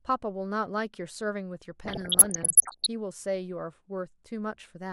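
From 1.85 to 2.87 s the speech is overlaid with DAB burbling, the sound of weak digital radio reception. Residual bit errors slip past the error correction into the MP2 data, a rate of roughly one percent, so corrupted samples put short blips of noise into individual sub-bands and corrupted scale factors make sub-bands leap in level for up to a frame. The result is a bubbling, squelchy chirping over the voice, dense enough to suggest most frames in that second were hit.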